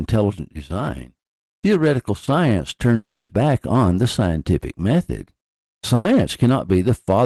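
From 2.95 to 3.32 s the sound smears into a fading buzz or hiss, then about 250 ms of silence, and resumes with roughly 300 ms gone. This is likely a long network dropout, with the receiver filling the gap for 340 ms.

From 3.33 to 3.75 s, just before "the scientific method", the audio sounds hurried at unchanged pitch, running about 9% fast. This is a jitter buffer speed-up: the buffer held more audio than it aims for, so short pitch-period slices totalling around 50 ms were cut to reduce the delay.

From 5.95 to 6.13 s the last sound is continued and fades for 100 ms, and 60 ms of audio is skipped without any silence. This is a burst of packet loss concealed by extending the last sound.

From 6.45 to 6.70 s there is another rushed stretch, about 13% fast, as a second jitter buffer speed-up trims roughly 40 ms.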